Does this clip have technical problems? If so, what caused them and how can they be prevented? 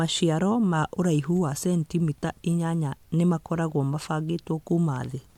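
No, there are no technical faults to trace or prevent here.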